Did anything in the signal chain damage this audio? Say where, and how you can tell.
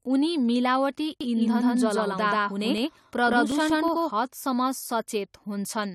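Yes. From 1.21 s to 4.11 s the speech is doubled by a second full-band copy trailing about 150 ms behind, at roughly the same level as the original. This is a doubled audio track. The copy has no decay or room colouring, and it cuts in and out abruptly at those boundaries, so it is not an acoustic echo. The likely cause is the signal being captured twice, once through a slower driver or buffer path, or an edit that left two misaligned copies in the mix.

Between 2.78 s and 3.88 s there are seven short ticks, the longest about 3 ms, at a steady rate of about six per second. These are CD scratch ticks, a storage and playback fault. A scratch or blemish on the disc corrupts more data than the error correction can rebuild. On each rotation the player interpolates over the missing samples or briefly mutes them, which produces a regular tick locked to the disc's rotation rate.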